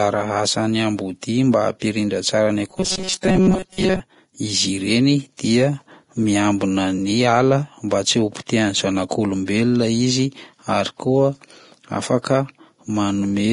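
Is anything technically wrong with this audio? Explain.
Yes, there are two faults.

Vorbis compression runs throughout. It is likely a low-quality Vorbis encode, consistent with about 32 kbps, that removes everything above 10.6 kHz and coarsely quantises the treble, leaving heavy hissy, grainy damage.

Robotic sound from repeated short buffers occurs from 2.71 to 4.00 s. Likely roughly 5.3 ms blocks are replayed over most of that stretch instead of new audio, producing a rigid, metallic 188 Hz buzz.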